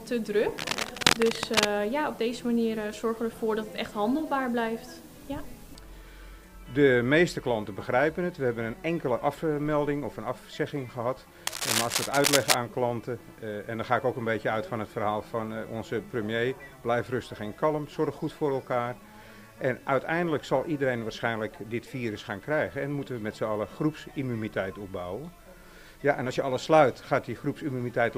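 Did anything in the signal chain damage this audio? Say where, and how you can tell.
Yes. In the analogue wiring, cable scratch noise: dense, ragged rustling at roughly programme level, 0.58–1.67 s and 11.47–12.54 s. It is likely a worn contact being moved. It is irregular and sustained, unlike single digital clicks.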